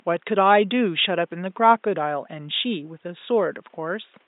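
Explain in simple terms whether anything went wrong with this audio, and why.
Nothing went wrong here: the speech signal is intact and continuous, and the only other sound is the faint room noise in the background, which sits far below the speech and is simply part of the space where it was recorded.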